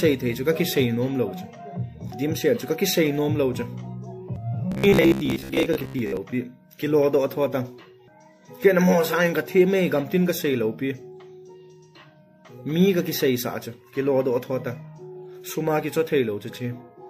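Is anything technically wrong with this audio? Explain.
Yes. From 4.72 to 6.17 s there is robotic sound from repeated short buffers. Audio likely arrived too slowly, so a 15 ms chunk was replayed for about half that stretch. The result is a rigid, metallic 66.7 Hz buzz. On a spectrogram this shows as evenly spaced harmonic lines, and the waveform shows identical repeating blocks.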